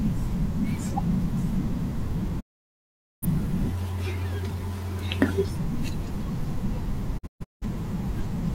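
Speech with two digital broadcast dropouts: a mute from 2.39 to 3.27 s, fading out over 20 ms, and scattered holes from 7.17 to 7.66 s, the longest 0.17 s. The receiver silenced failed frames, and the speech resumes further on, skipping what was sent.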